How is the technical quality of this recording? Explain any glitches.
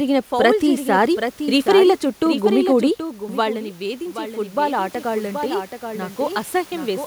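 The recording has two clear faults. One runs through the whole clip, and the other begins partway through.

The first is a doubled audio track, heard from start to finish. A second copy of the speech trails the original by roughly 0.7 s. It sits about 10 dB lower. This copy is full-band and dry, with no decay or room colour, so it sounds like a faint, clean repeat rather than an echo. The likely cause is the same signal captured again through a slower path and mixed back in.

The second fault is automatic gain rising, from 2.97 s to 7.01 s. Around 3 s the talker moves away, and the level at the microphone falls by about 13 dB. The automatic gain control reacts by lifting its gain slowly, by about 7 dB over those four seconds. The speech and the room noise swell up together. The result is a gradual creep in loudness, and the background noise grows along with the voice.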